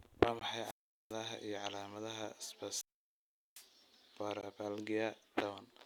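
It's a short speech clip with two separate problems. There's a gap between stream segments at 0.39 s and again at 4.41 s: a hard-edged hole of about 18 ms each time, exactly 4 s apart. That's where the segment timestamps don't quite meet and the player pads the join with silence, so nothing is actually lost. There are also two wireless microphone squelch dropouts, from 0.62 to 1.15 s and from 2.68 to 3.68 s. In each one, the radio link fades and you get a rise of hiss before the receiver's squelch cuts the output to near silence, for about 0.4 s the first time and about 0.75 s the second, and then the signal comes back.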